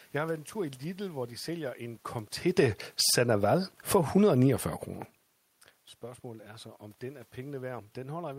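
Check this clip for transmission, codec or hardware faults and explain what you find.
The automatic gain control misbehaves here, pumping the level down and up within about two seconds of the speech.

Automatic gain falling occurs twice. From 2.43 to 3.28 s, just after "hvor de sælger en", the control judged the input too loud and cut its gain by about 11 dB, then again by about 8 dB from 3.79 to 4.2 s. Each time the speech and its room background sink together.

Automatic gain rising runs from 3.19 to 4.74 s, overlapping both dips. The control judged the input too quiet and lifted its gain by about 5 dB. Speech and room noise swell together over roughly one and a half seconds, so the level seesaws.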